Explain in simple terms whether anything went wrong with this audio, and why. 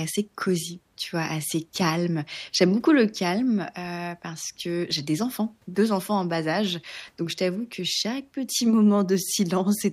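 Nothing went wrong with this speech recording: the signal stays steady and intact the whole way, with nothing technically out of place for a listener to notice.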